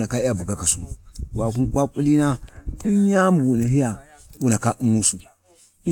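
At 1.55 s the speech has a single sharp tick, a brief dropout of about 2.9 ms that is too short to hear as a gap. This is a block of digital silence: a run of samples was replaced by silence, and the signal cuts out and back with no fade. The length fits a 128-sample buffer, which points to the program not filling one output buffer in time.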